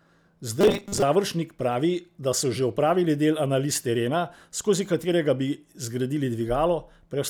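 From 0.61 to 1.02 s, new audio likely arrived too seldom, so the software kept replaying a 5 ms stretch and skipped about half the real signal. This robotic sound from repeated short buffers forces a rigid, metallic 200 Hz buzz onto the voice.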